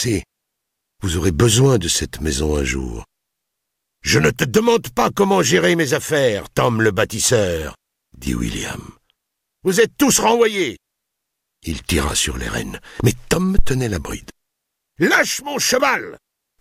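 At 13.59 s there's a phantom power thump: the supply got switched on a live input, and that voltage step punched through the coupling capacitors. You hear a deep thud peaking at about -1 dBFS, dying away in roughly 41 ms, gone by 13.77 s.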